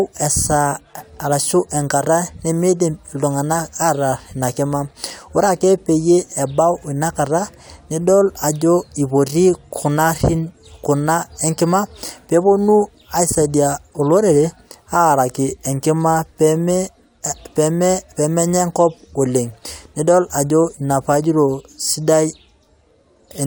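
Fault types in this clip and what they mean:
No fault types are present in this clip.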